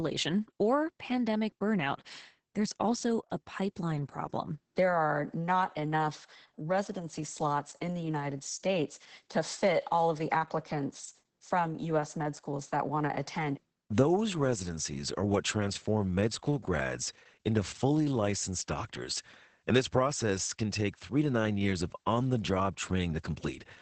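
From start to finish the speech sounds muffled, hoarse and slightly robotic, with nothing above about 8.7 kHz. That is Opus voice compression in its SILK mode: a wideband band limit and coarsely coded excitation, which fits a low bitrate near 10 kbps.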